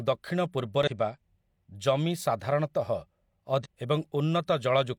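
At 0.83 s the speech breaks into a short, harsh blip lasting about 50 ms, and a second one follows at 3.61 s for just under 60 ms. Both come from damaged data in a compressed stream. Corrupted bytes made the decoder misread those frames and lose sync until it found a valid frame header again, so each gap is filled with garbled decoded output instead of the intended audio.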